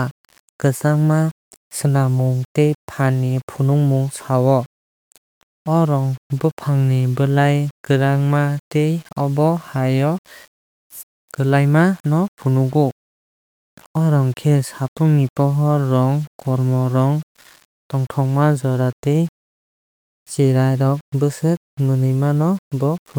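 Speech, with grainy distortion throughout that follows the voice. Quiet passages turn gritty, with error roughly 30 dB down. This is likely low bit depth without dither, around 7 bits, rounded.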